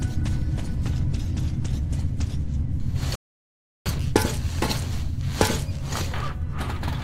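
At 3.15 s the audio stops dead and stays silent until 3.86 s, a rebuffering stall adding about 0.7 s: playback ran short of downloaded data and waited. Unlike a dropout, it resumes exactly where it halted, with nothing skipped.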